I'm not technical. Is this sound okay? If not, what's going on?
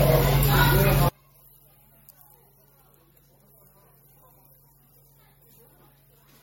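No. Throughout, the sound has a swirly, smeared, hollow quality, with sharp starts blurred and the very highest treble missing. That is generation loss: the audio was likely saved in the MP3 format, reopened and saved again about four times. Each save throws away a little more detail in a slightly different place, so the damage piles up into this washed-out, watery character instead of staying small.

From about 1.09 s to the end, the sound almost disappears and leaves only a faint trace. That is one channel inverted: one side was likely flipped upside down, so the two sides cancelled each other when they were combined into one.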